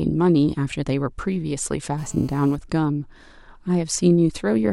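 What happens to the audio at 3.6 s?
Nothing goes wrong at 3.6 s: the speech there is intact, with no dropout, click, distortion or other fault at that point.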